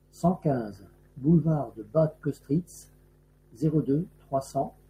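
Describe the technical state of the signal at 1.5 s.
At 1.5 s the speech signal is intact, with no audible technical fault at that moment.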